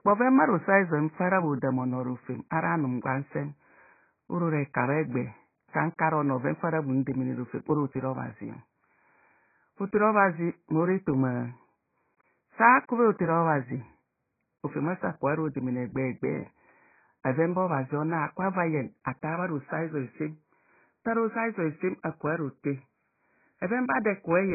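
Speech, and it is heavily degraded for its whole length. Nothing is heard above 2.5 kHz, so the sound is dull and muffled. Sibilants lose their edge and turn soft and fizzy. Sustained sounds warble and smear. The likely cause is AAC compression. At this level of damage, the encoder drops the upper band and coarsely quantises what remains, leaving gaps in the spectrum. The sound fits AAC-LC at a very low bitrate, around 12 kbps.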